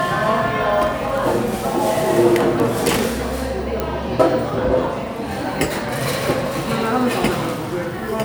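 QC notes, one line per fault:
1.18 s, 2.6 s, 3.8 s: bit error spike. Each is a single sample jumping to about −12 dBFS, then about −6 dBFS twice, and returning at once. A flipped bit throws one sample value off by a power of two, giving a sharp broadband tick unrelated to the surrounding audio.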